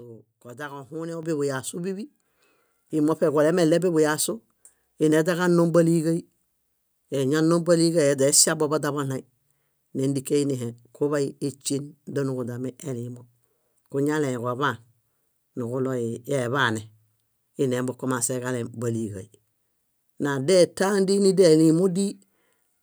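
At 1.23 s the microphone volume steps up by about 8 dB, then again at 2.25 s by about 4 dB. Something raised the input gain in discrete jumps, so the voice and the background noise both get louder at once, with an abrupt level change.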